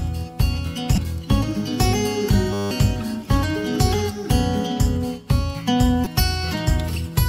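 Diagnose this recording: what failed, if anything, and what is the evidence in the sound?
Damaged data in a compressed stream is heard twice, at 0.94 to 0.98 s and again at 6.03 to 6.07 s, each a brief glitch about 36 ms long. The fault lies in the codec stage: corrupted bytes in the compressed stream made the decoder misread those frames and lose sync until it found a valid frame header. In the waveform it shows as an abrupt discontinuity.

A system hang loop occupies 2.53 to 2.71 s, at the driver or buffer stage. The machine stalled while the audio hardware kept replaying its ring buffer, so one 10 ms fragment repeats 18 times, producing a steady 100 Hz buzz. This fits a small buffer cycling without fresh data. In the waveform, identical 10 ms cycles stack up like a stamped pattern. On the spectrogram, harmonics at 100 Hz spacing form a comb. About a fifth of a second of the real audio is missing.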